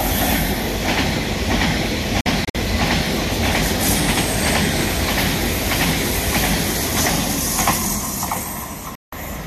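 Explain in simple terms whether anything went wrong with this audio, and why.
Two digital broadcast dropouts. Around 2.21 to 2.55 s the sound keeps cutting out in several short holes, about 120 ms in total, and again from 8.95 to 9.13 s. Both times the receiver lost good data and muted, so that audio is gone.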